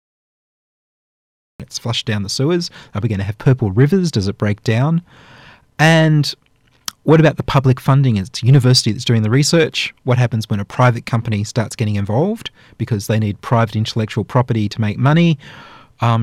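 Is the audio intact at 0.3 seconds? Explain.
No, at 0.3 seconds you're still in the cut-off start, which is dead digital silence from 0.0 to about 1.60 s. Capture began late, so the speech then drops in abruptly mid-sound on "it's flushed down the", with no natural attack.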